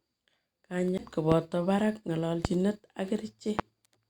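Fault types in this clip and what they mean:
CD skip: The player's laser lost its track and landed on a different turn of the disc's spiral, so playback resumes from another point rather than continuing where it left off. At 0.98 s the speech cuts out for roughly 10 ms, then carries on displaced by the jump, giving an abrupt discontinuity in the flow of the speech instead of a smooth join.
Loud pop: A single sharp transient sits on top of the speech at 1.32 s, 2.45 s and 3.59 s, each about 28 ms long, with the speech continuing underneath. The first peaks roughly 15 dB above the speech and the other two about 20 dB. The likely cause is a brief voltage pulse entering the signal chain, whose shape is then smeared slightly by the downstream circuitry into a short pop.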